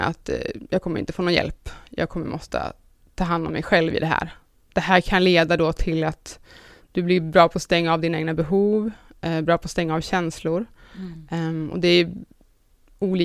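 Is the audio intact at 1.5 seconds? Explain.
Yes, the speech at 1.5 seconds is intact, with no dropout, click, distortion or other fault audible at that moment.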